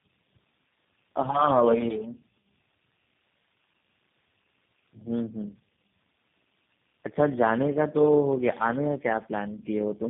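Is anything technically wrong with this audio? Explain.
Yes. Tandem speech coding runs throughout the speech. It sounds like three low-rate speech coders in a row, each re-coding the previous one's damaged output. The result is rough, muffled and warbly, with nothing above 3.5 kHz.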